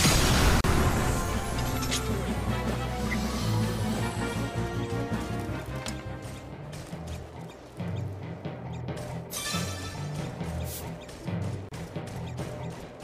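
At 0.61 s and 11.69 s, a gap at a join of encoded pieces cuts out about 34 ms and 29 ms. Untrimmed encoder delay and padding leave brief silences with smeared edges before the sound resumes.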